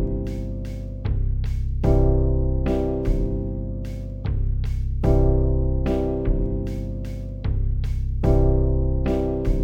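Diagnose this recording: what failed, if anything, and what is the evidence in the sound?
A stereo read as mono fault at the sample-format conversion stage runs throughout the recording. The whole clip plays at half speed and an octave low, a drop of 12 semitones, with a fainter mirror image of the sound in the upper half of the spectrum. The left and right samples, stored interleaved, were read in sequence as one channel. Each frame therefore yields two output samples, doubling the duration and halving every frequency.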